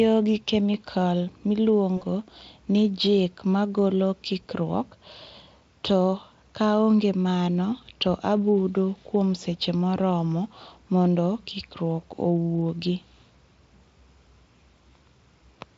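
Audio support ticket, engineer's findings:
VoIP packet loss concealed by the speech codec at 1.97 to 2.04 s: about 40 ms, fitting two lost frames. Decoder extrapolates the last pitch, stretching into buzz or coloured noise, fades, then recovers. Speex path itself intact.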